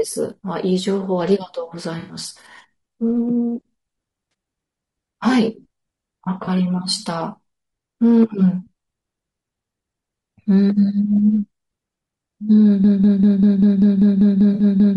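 Speech carries plainly audible low-delay AAC compression throughout. The voice is rough and grainy, with noise filling the gaps between harmonics and a thin, synthetic-sounding top band. This fits AAC-ELD at around 32 kbps, whose short frames resolve pitch harmonics poorly at that rate. On a spectrogram the harmonic stripes look blurred and speckled, with hazy energy between them and a smeared, patchy upper band. There is AAC frame loss with concealment at 1.99–2.17 s (about 100 ms, which fits five lost 20 ms frames), 4.31–4.33 s, 6.45–6.48 s and 14.53–14.63 s. In each, the decoder papers over the gap by rebuilding sound from the last good spectrum, so these spots come out as brief smeared, noisy or phasey patches rather than dropouts. A spectrogram shows short columns where the harmonic detail turns to diffuse noise, and the waveform keeps its level but loses its clean periodic shape. 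From 12.84 s to the end a broken-record loop takes over: a fragment of about 196 ms repeats back to back roughly eleven times, and the speech that should have followed is gone. This is likely a stall in the player, encoder or stream that kept resending the last fragment it held. The waveform shows an identical block tiled end to end, and the spectrogram a regular comb of copies spaced about 0.2 s apart. The last concealment patch falls inside this loop.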